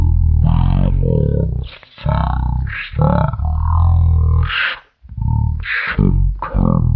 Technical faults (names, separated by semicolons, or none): wrong sample rate